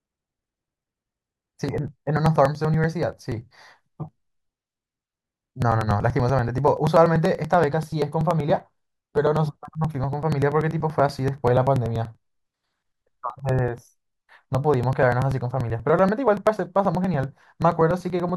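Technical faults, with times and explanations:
0.06 to 18.29 s, periodic USB or driver dropouts: a steady tick every 96 ms, heard only while sound is present. Each tick is a few milliseconds of audio skipped outright, as a background task repeatedly stalls the USB bus or audio driver.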